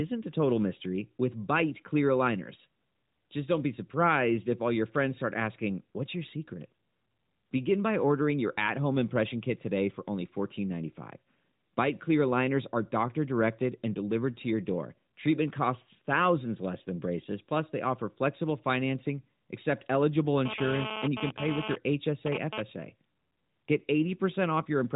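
A hard, raspy buzz cuts into the speech from 20.45 to 22.61 s, stuttering on and off at about 3 dB below the speech, over narrowband audio with nothing above 3.8 kHz. This is GSM phone buzz: a nearby 2G phone transferring data sends radio bursts about 217 times a second, and the audio circuitry rectifies them into a harmonic-rich 217 Hz rasp.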